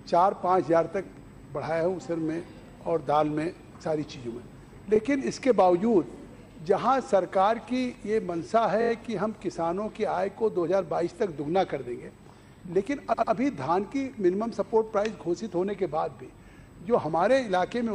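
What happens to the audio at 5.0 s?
A repeated-frames fault sits just before that point, from 4.95 to 4.97 s. A single 23.2 ms block of compressed audio was delivered twice, which fits one codec frame being written or sent again, so the decoder plays that slice a second time. The result is a very brief stutter, and everything after it arrives 23.2 ms later than it would have.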